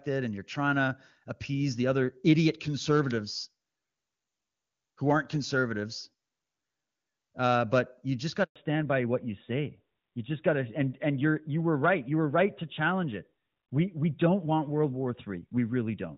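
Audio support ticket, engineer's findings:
Handover gap at 8.44 to 8.56 s, right after "but you just got": speech fades out within a few tens of ms, then 120 ms of true silence. Likely cause is a network handover with no frames delivered during the switch. It differs from packet loss concealment because nothing is smeared, repeated or buzzy. The audio simply drops out, and the band change follows immediately.

Fallback to narrowband from 8.56 s to end: nothing above 4 kHz, with a duller and rougher texture. Before the gap, the wideband content points to HD Voice (AMR-WB) running at a high rate, around 23.85 kbit/s, with at most faint codec damage. After the gap, it sounds like AMR-NB at about 12.2 kbit/s. It differs from a plain low-pass filter because the cutoff is hard, it starts exactly at the handover, and it brings narrowband codec roughness.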